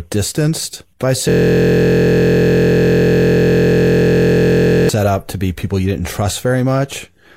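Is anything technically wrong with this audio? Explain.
Yes. A system hang loop runs from 1.29 s to 4.89 s. The machine or its audio driver stalled while the sound hardware kept replaying the same ring buffer. A single 23.22 ms slice of audio, which fits a 1024-sample buffer, repeats exactly about 155 times. Because the slice is so short, the speech doesn't stutter. It turns into a steady, mechanical buzz pitched at the 43.1 Hz loop rate until playback recovers.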